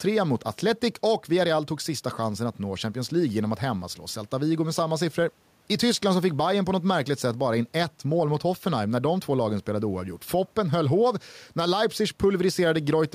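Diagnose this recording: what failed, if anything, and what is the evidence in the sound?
The input gain is likely set far too high for the microphone, with a fast limiter or compressor in the processing chain pulling the level down on every loud syllable. Throughout the speech, the gain swings by around 5 dB. The room noise sits about 44 dB below the speech. Loud and soft passages end up closer in level, and the speech sounds squashed.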